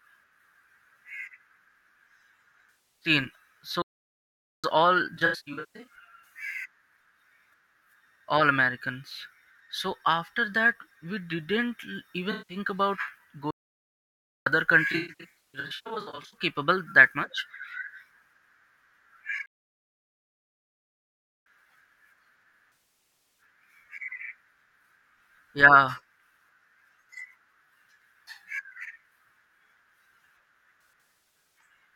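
AAC frame loss with concealment hits at 2.70–3.09, 5.15–5.95, 12.31–12.56, 14.92–16.37, 22.74–23.41 and 30.83–31.58 s. The decoder patches missing frames from the last good spectrum, so those spots sound smeared and noisy. Playback stalls cut the speech dead at 3.82–4.64, 13.51–14.46 and 19.46–21.46 s, the last a full 2 s of silence, likely because the player ran out of data.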